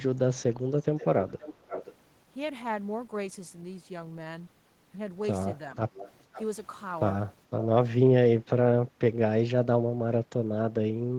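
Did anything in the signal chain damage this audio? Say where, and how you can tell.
Yes. The damage is in call processing, most likely a loudspeaker-side echo canceller that failed to remove all of its microphone pickup, so an echo leak returns a delayed copy of the speech in scraps at 0.81–1.06, 1.28–1.95, 5.96–6.11, 6.33–6.41 and 7.60–7.65 s. The first lags by 431 ms, the rest by 522 ms. The copies sit about 15 to 20 dB below the speech, which fits canceller residue rather than a routing loop.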